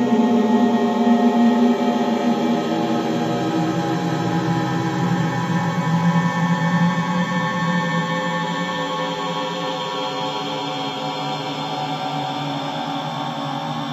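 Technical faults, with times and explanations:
No technical faults can be heard in this recording of sounds. Nothing in it calls for a time or an explanation.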